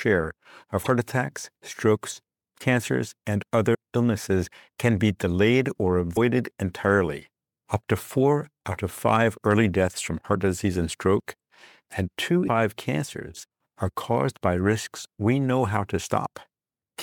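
Damaged data in a compressed stream produces brief glitches at 0.83–0.87, 3.71–3.75, 6.13–6.17 and 12.45–12.49 s in the audio, each about 40 ms long. Corrupted bytes make the decoder misread those frames and lose sync until it finds a valid frame header again.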